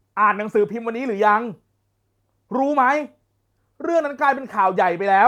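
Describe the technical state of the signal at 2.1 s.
At 2.1 s the speech signal is intact, with no dropout, distortion or other audible fault at that moment.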